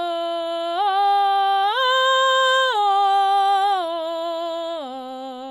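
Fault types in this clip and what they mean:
MP3 compression: the music sounds watery and swirly, with faint detail flickering in and out as weak frequency lines drop between frames, plainly audible throughout; this likely comes from MP3 encoding at a low bitrate, around 64 kbps.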